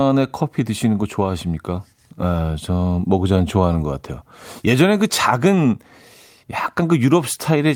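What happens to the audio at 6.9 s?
Repeated timing corrections are happening at 6.9 s, part of a run from 0.08 s to 7.57 s in which the receiver trims short slices out of the speech to keep pace. The trimming works out to playback at 104% speed, and it is heard, if at all, as a slight hiccup or an unsteady tempo.

The cause is clock drift between sender and receiver. The sender's clock runs about 4 percent fast, so its audio keeps piling up in the jitter buffer, and the receiver must repeatedly discard small pieces to stop the buffer overflowing.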